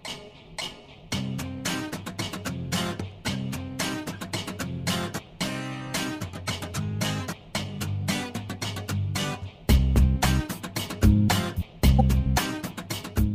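Corrupt frames decoded: damaged compressed data played anyway, giving a brief blip at 6.46 s, then a louder burst from 11.99 to 12.01 s across several frames.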